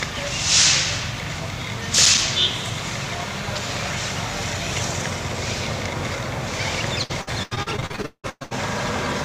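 Right around 1.95 s there's a bit of loose connector crackle, running to about 2.28 s. It sounds like a contact somewhere in the chain is worn or dirty and briefly making and breaking as it shifts. Each break chops the signal, so you get a short, irregular scratchy burst of crackle lasting about a third of a second.

Later, from about 7.03 s to 8.54 s, you hit repeated packet loss, and it goes robotic. Over that stretch of roughly a second and a half, chunks of audio keep going missing, over a dozen of them, and each hole gets papered over by stretching the last bit of sound that arrived. About half of that stretch is patched-in filler rather than real audio, and the longest single gap is around 0.18 s, so it comes across as choppy.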